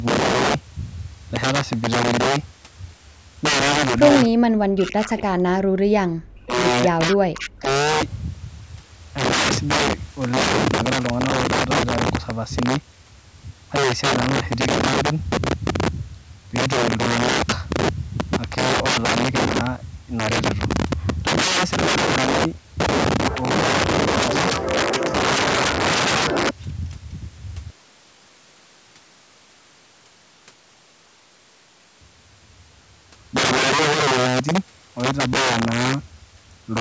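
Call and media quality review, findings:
Integer overflow, throughout. Violent cracks on loud speech peaks, far harsher than clipping. Gain stage pushed about 14 dB past full scale; with no saturation, samples over the limit wrap to opposite polarity. Affects a small fraction of samples, around 7 percent, peaks only.

Speech suppressed in double talk, 4.28–5.7 s, 5.88–6.54 s, 6.93–7.68 s. Near-end speech dips hard, up to about 40 dB, and drops out in pieces. Likely the echo canceller misjudging overlap with far-end audio and attenuating both.

Echo leak, 5.17–5.23 s. Brief copy of speech, delayed 267 ms, around 20 dB under the direct voice. Likely residual loudspeaker echo the canceller failed to remove. The band tops out at 8 kHz, normal for call microphone processing.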